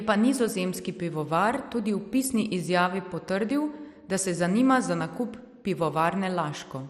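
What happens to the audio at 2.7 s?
At 2.7 s, as across the whole speech clip, the sound is dull and gurgling with granular grit, consistent with MP2 compression at a likely low bitrate near 64 kbps: starved upper sub-bands switch off, leaving nothing above 14.4 kHz and coarse, flickering remaining bands.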